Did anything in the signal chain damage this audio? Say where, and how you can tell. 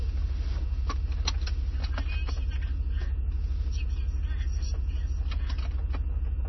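Yes. MP3 compression damage runs through the whole clip, and the codec stage is the likely cause. Nothing reaches above 5.9 kHz; the treble stops at that fixed wall, as when an encoder short of bits abandons the top band entirely. The remaining sound has a heavy watery, swirling texture, with weak spectral components flickering in and out between frames and transients smeared. Damage this severe fits a very low bitrate of around 24 kbps.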